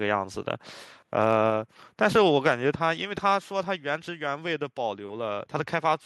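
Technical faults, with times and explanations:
1.5 s, microphone volume stepped down: the whole sound, background included, drops by about 2 dB in one step, likely the input volume being lowered, unlike a gradual fade.
2.47–2.5 s, microphone overload: peaks exceed the converter limit by about 1 dB, with roughly one percent flattened, giving a brief harsh crackle, likely from excessive input volume rather than later processing.
2.52 s, microphone volume stepped down: just after that distorted peak, everything drops about 2 dB more at once, a step rather than a compressor's smooth, recovering dip.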